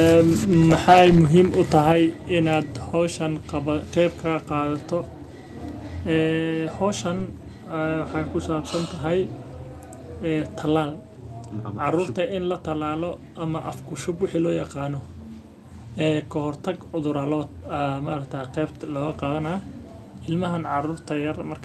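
Microphone overload from 0.73 to 1.06 s: the loudest peaks run about 8 dB past the converter's limit, likely from input volume set too high, so a few percent of samples are flattened into a harsh crackle. Microphone volume stepped down at 0.93 s: the level suddenly drops by about 2 dB, likely the call software cutting the device gain in one step after that distortion. A second, milder microphone overload follows from 1.75 to 1.89 s, about 1 dB over with well under one percent of samples clipped, giving a brief rough edge. Another microphone volume step down comes at 1.92 s, a sudden drop of about 5 dB.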